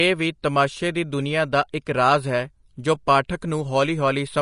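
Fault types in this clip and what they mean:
Vorbis compression: The speech sounds hissy and grainy throughout, with rough tones and soft attacks. Nothing is heard above 10.5 kHz. The treble turns to noise-like fuzz. The likely cause is low-quality Vorbis coding, which fits a bitrate near 36 kbps.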